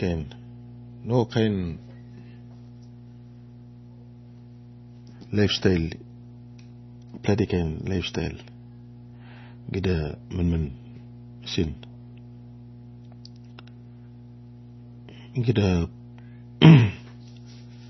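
From start to finish, a steady mains hum sits under the speech at 60 Hz, roughly 20 dB below the voice, from power-line leakage such as a ground loop. Unlike a buzz, it is a smooth, pure low tone with few bright harmonics.

Also throughout, nothing remains above 5.9 kHz, and the speech sounds watery and swirly, with weak detail flickering in and out. This is likely heavy MP3 compression, consistent with a very low bitrate around 24 kbps. That warbling distinguishes it from a plain low-pass filter.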